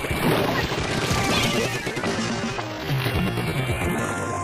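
Throughout the recording the two channels are drifting apart: a clock mismatch of around 70 ppm lets the inter-channel delay creep up to a fraction of a millisecond by the end, so a mono sum gets comb notches sliding through the spectrum, heard as slow flanging. From 1.44 s to the end, the audio plays at about 0.62 times its original pace with unchanged pitch, so it drags. That points to a time-stretched section, likely from software repeating short segments to lengthen the audio.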